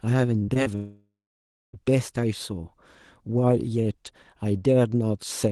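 From 0.39 to 0.67 s the speech breaks up with repeated packet loss: four short holes, the longest 44 ms, each patched by stretching the previous sound, so about a third of the stretch turns choppy and robotic. The sound recovers between holes, unlike a single dropout.

From 0.75 to 1.75 s there is a long network dropout, likely from the connection stalling. The last sound is smeared into a fading buzz or hiss, then about 0.63 s of silence follows before speech resumes with that second missing, rather than stuttering on and off.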